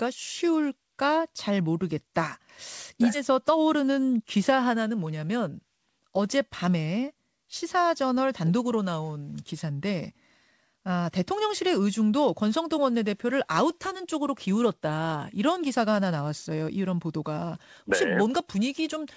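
At 3.14 s a stretch of speech was dropped while later audio was already queued, a skip ahead. Roughly 0.4 s is missing, and the speech on either side is butted together with no gap or fill, so it lurches forward abruptly.

From 3.30 s to 5.48 s the buffer was still holding more speech than its target, so a jitter buffer speed-up trimmed many short pitch-period pieces, around 150 ms in total. The speech runs at 106% speed with unchanged pitch and sounds slightly rushed, all band-limited to 8 kHz by the G.722 codec.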